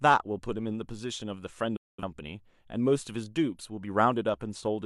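At 1.76 s the speech drops out abruptly, fading to silence over about 8 ms, and stays muted until 2.03 s. This is a digital broadcast dropout: the receiver stopped getting valid frames, muted rather than play corrupt data, and resumed once good frames arrived. The gap of roughly 213 ms fits about five lost frames, and that stretch of programme is simply gone. On a waveform it shows as a flat, empty band with a steep edge; on a spectrogram, a clean vertical blank across all frequencies.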